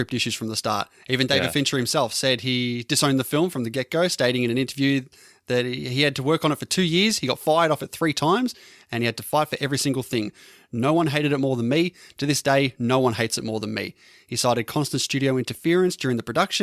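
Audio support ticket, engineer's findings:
No audible faults found in the speech recording; nothing to escalate.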